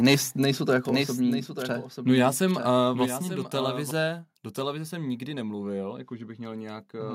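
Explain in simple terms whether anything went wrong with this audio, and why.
A few things went wrong here, all in the first four seconds.

Right at the start, from 0.07 to 0.14 s, just before "nejsou to", there's a harsh, crackly edge on the loudest bit. That's microphone overload: the input was likely set too hot, so the peaks ran past what the converter could record and their tops got chopped flat. That flattening is what turns a clean peak into a brief crunch of distortion.

Then from 0.89 s, right after "nejsou to", until 3.91 s, just before "do televize jsem nikdy", you hear a doubled audio track. A second copy of the same sound runs along about a second behind the first, a bit quieter but just as clear, with no echo tail or room sound. It cuts in and out abruptly. That's likely a second, slower capture path getting mixed in, or two out-of-step copies left in an edit.

On top of that, the level drops suddenly twice, at 1.02 s and again at 3.06 s. 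That's the microphone volume being stepped down. The call software likely noticed the input was too loud and turned the mic down in one jump each time, so everything, background included, gets quieter all at once.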